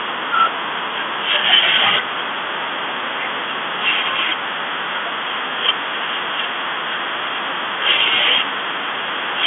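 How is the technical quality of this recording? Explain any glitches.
No glitches turn up anywhere in this one; it's just ordinary telephone-line speech, sounding the way a standard phone call does.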